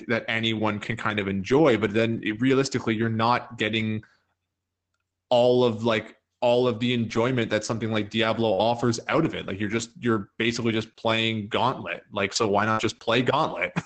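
At 8.53 s the sound stalls briefly, until 8.61 s. This is a short stall from a late packet. The packet was not there when due, so the jitter buffer ran dry. The receiver held the last sound for about 43 ms, then carried on from the same point. Nothing is lost. One sound is simply drawn out, with a faint buzz, and everything after it runs 43 ms later.

Inside that stall, at 8.58 s, comes the first lost packet rebuilt from error correction. Each one covers 60 ms. The others follow at 9.78, 10.14, 10.92 and 12.36 s, then at 12.77 and 12.95 s. Each time a packet went missing, but the next one carried a low-bitrate copy of it. The decoder played that copy, so there is no gap. Those short stretches just sound rougher and a little noisier.

From 12.72 to 12.80 s there is a burst of packet loss. Several packets in a row never arrived in time. The receiver extended the last sound for about 55 ms and let it fade, which gives a held buzz or a dying hiss. 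Playback then jumps ahead, and 60 ms of the speech is gone. The rebuilt packet at 12.77 s falls inside this stretch, so the restart itself is rough.

Throughout, the audio stops at 8 kHz, which points to Opus running in wideband mode.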